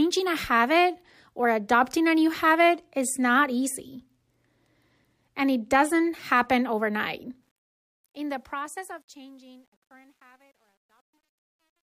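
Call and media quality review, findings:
Truncation distortion on a fade, 7.43 to 11.89 s, after "it doesn't happen overnight". The fade-out turns gritty, worst from 9.09 to 11.9 s. Fade stage drops low bits without dither; fits a 10-bit stage. Grit tracks falling level, unlike gate chatter.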